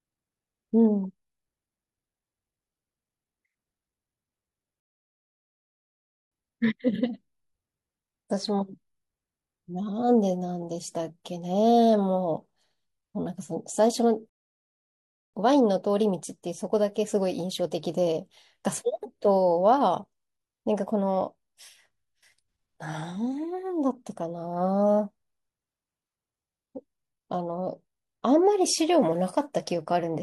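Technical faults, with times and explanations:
4.8 to 6.32 s, rebuffering stall: the speech drops to silence for about 1.5 s, then picks up exactly where it stopped, because playback ran out of downloaded audio.
14.29 to 15.34 s, rebuffering stall: a second silent gap of about 1.0 s, after which the speech resumes with nothing missing, as the player waited for more data to arrive.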